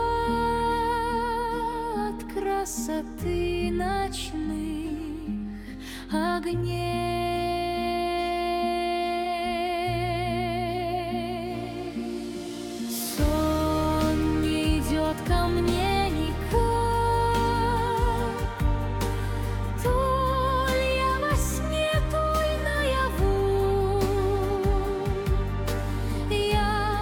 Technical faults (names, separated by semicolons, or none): none